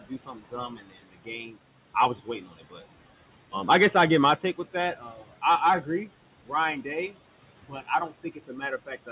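Throughout, a noise suppressor pulls the room's background down by about 18 dB frame by frame. The noise drops away in pauses and rises back under the speech.

In five stretches the same noise suppressor cuts speech it has mistaken for noise: 0.00 to 1.58 s (dips of up to about 19 dB, roughly a second in total), 1.94 to 2.81 s (about 14 dB), 4.39 to 5.43 s (about 11 dB), 6.46 to 7.13 s (about 16 dB, only briefly), and 7.68 s to the end (about 15 dB). Soft consonants and word endings there sound swallowed or faint.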